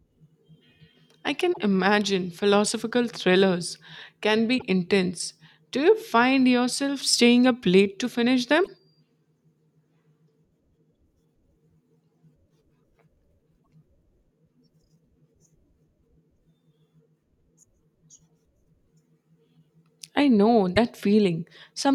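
Damaged data in a compressed stream breaks up this speech recording five times. Corrupted bytes leave the decoder unable to read the affected frames, so it loses sync and hunts for the next valid header, producing brief bursts of garbled sound about 0.08 s long at 1.50, 4.55 (just after "imagine philosophical thrillers can"), 8.61 (after "up late to finish") and 13.60 s, and a shorter 0.05 s one at 20.73 s, after "I know".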